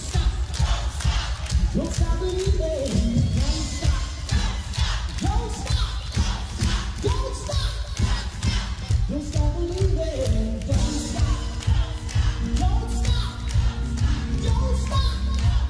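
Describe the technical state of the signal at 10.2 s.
At 10.2 s the signal is intact, with no audible fault at that point.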